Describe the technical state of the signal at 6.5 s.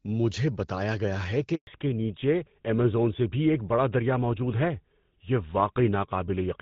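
At 6.5 s the sound is dull and rough, with nothing above 4 kHz. This is a fallback to narrowband that began at 1.67 s and runs to the end: the call has dropped from AMR wideband, and the coarser band-limited coding fits GSM full rate.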